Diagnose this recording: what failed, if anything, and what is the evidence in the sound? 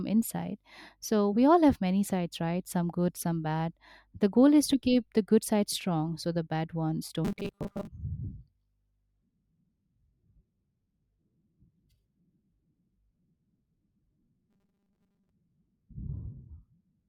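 The speech turns into a rigid, metallic buzz pinned at 200 Hz from 7.25 to 7.90 s, right after "so the bad ones", and again from 14.50 to 15.30 s, still loosely following the speech underneath. This is robotic sound from repeated short buffers, likely at the driver or buffer stage. Audio arrived too seldom, so a roughly 5 ms chunk was looped, replacing about half of the first stretch and most of the second while the real audio was skipped.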